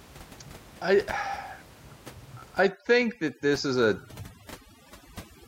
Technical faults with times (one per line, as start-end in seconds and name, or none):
2.63-5.47 overdone noise removal